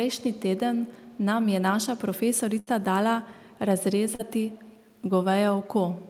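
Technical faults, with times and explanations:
0.08–0.40 s, 0.75–1.18 s, 3.39–3.58 s, 4.47–4.93 s, echo leak: a faint copy trails the speech by 164 ms, roughly 25 to 35 dB down, likely a far-end loudspeaker echo the canceller missed.
2.59–2.70 s, burst of packet loss: about 74 ms of the last sound is stretched and faded to fill the hole, then audio resumes with 80 ms skipped.
4.15–4.22 s, short concealed packet loss: 40 ms went missing and was patched by extending the previous sound, leaving a brief smear before the real audio blends back.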